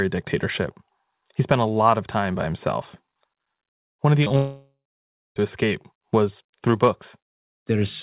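Right after "of the", at 4.24 to 4.27 s and again at 4.29 to 4.31 s, the speech briefly smears and wobbles. These are two short concealed packet losses: about 20 ms and then 10 ms of audio arrived too late for the decoder, so the receiver stretched the preceding sound to cover each gap before rejoining the real signal. Both sit in audio already limited to below 4 kHz, as the call codec on this path leaves it.

From 4.36 s the sound turns into a fading buzz that decays into silence, and the speech does not return until 5.37 s with "to escape was through". Roughly a second of speech is simply gone, and the silent stretch lasts about 0.58 s. This is most likely a long network dropout. The receiver extrapolated the last sound for a few tenths of a second and then gave up and muted, so when the stream resumed it picked up later in the sentence and the missing part was never played.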